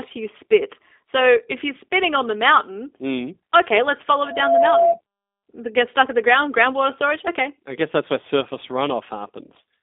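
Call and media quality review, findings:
G.729 codec, throughout. Band limited to roughly 250 Hz to 3.6 kHz, nothing above 3.6 kHz. Plainly audible rough, synthetic texture from filter-plus-pulse resynthesis of speech, consistent with an 8 kbit/s G.729A stream.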